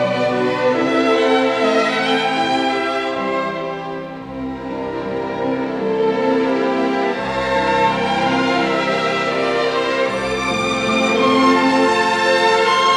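No technical faults can be heard anywhere in this audio. Nothing in it breaks, drops out or distorts at any point.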